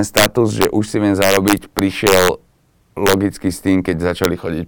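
Speech with integer overflow: loud peaks exceed the integer limit and wrap to the opposite sign instead of clamping, producing harsh cracks at 0.17–0.26 s (about 8 dB over), 0.62–0.65 s, 1.22–2.28 s, 3.07–3.14 s, and a brief snap at 4.24 s.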